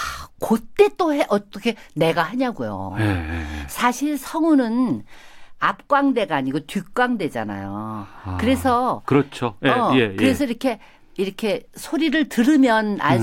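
No technical faults can be heard anywhere in the recording.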